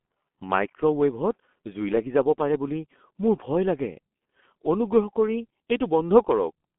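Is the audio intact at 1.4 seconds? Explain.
No. At 1.4 s, as throughout, the speech sounds muffled and hoarse with smeared consonants, from G.723.1 codec coding at a rate fitting 6.3 kbit/s that leaves nothing above 3.8 kHz.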